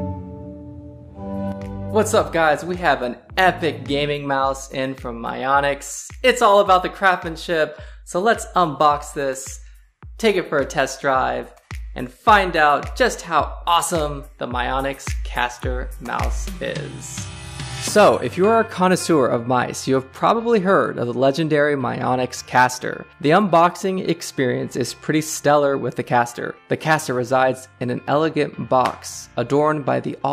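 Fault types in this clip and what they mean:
No technical faults can be heard anywhere here.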